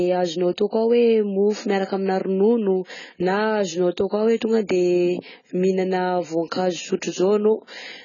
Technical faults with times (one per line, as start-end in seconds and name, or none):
0.00-8.04 AAC compression